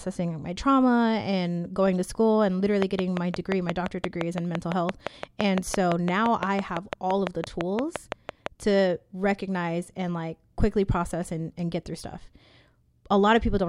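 A train of clicks runs through this speech clip from 2.82 s to 8.47 s, roughly thirty sharp pulses of much the same shape arriving at a regular 5.85 per second. They sit well above the speech, peaking at about 20 dB over the signal, and tick through the pauses as well as the voiced passages. The steady pacing and uniform pulse shape point to a likely cause in interference from nearby equipment or a faulty connection or power supply.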